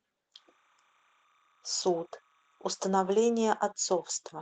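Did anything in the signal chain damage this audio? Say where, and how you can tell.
Yes. Between 0.35 and 2.84 s a faint, steady chirping warble sits well below the speech. It flips between two pitches near 1 and 2 kHz, which is the signature of timecode bleed, an analogue wiring fault. Linear timecode is a square wave whose bit cells switch between those two rates, and its regular cadence fits 29.97 fps code. It has leaked in from an adjacent track or cable at a very low level, around 40 dB under the speech.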